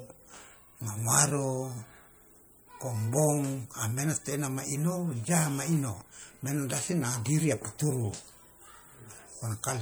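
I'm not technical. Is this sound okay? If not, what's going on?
No. MP3 compression damage runs through the whole speech clip, from start to finish, and it is plainly audible. The file was likely saved with MP3 at a tight setting, so the encoder had too little room. It dropped quieter details, which flicker in and out. That leaves the voice sounding watery or swirly, with metallic fizz on s sounds and softened word beginnings.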